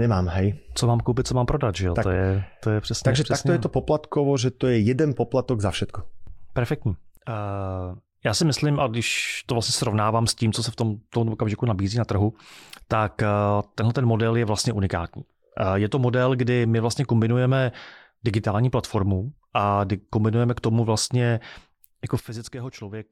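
At 6.95 s the level drops abruptly by about 8 dB, speech and background noise together, then returns at 8.13 s; at 22.20 s it falls by about 12 dB until the end. Each sudden gain jump likely comes from a gain setting applied without a ramp.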